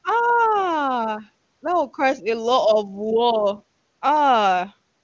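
No technical fault can be heard in this speech recording, which has passed through call microphone processing and the AMR wideband (HD Voice) codec at its highest rate of 23.85 kbit/s, with nothing present above 8 kHz.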